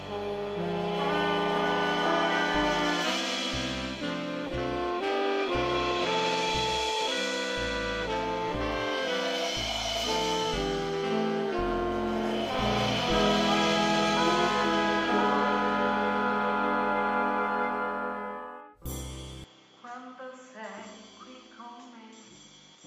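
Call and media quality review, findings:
Input likely switched to a poorer device at 19.44 s, holding to the end. Band now stops at 7.6 kHz; sound duller, about 5 dB quieter, fresh noise floor roughly 30 dB down. No gap at switch.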